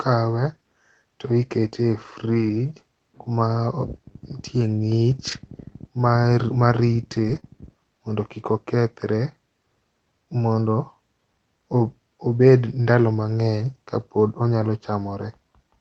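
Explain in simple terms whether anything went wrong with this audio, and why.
Short patches of the speech turn rough and grainy at 2.29 to 2.59 s, 5.27 to 5.33 s, 7.15 to 7.37 s, 12.98 s and 14.18 s, without any silence. This is a lost packet rebuilt from error correction. Pieces of the call went missing in transit, and the decoder played a lower-quality backup copy carried in the next piece.

Right after that, at 7.39 to 7.44 s, a quick smear or wobble briefly blurs the sound. This is a short concealed packet loss. About 20 ms of audio never arrived, so the receiver stretched the preceding sound to cover the hole and blended back into the real audio.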